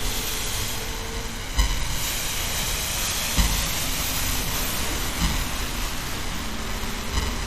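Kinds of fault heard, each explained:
MP2 compression: The sound is dull throughout, with a plainly audible gurgling, grainy roughness. Nothing is heard above 15 kHz. The likely cause is MPEG Layer II coding at a low bitrate, which fits about 64 kbps. This coder splits the spectrum into 32 equal sub-bands and shares a fixed bit budget among them. Short of bits, it shuts off upper bands and quantises the rest coarsely. Bands blinking in and out give the granular texture.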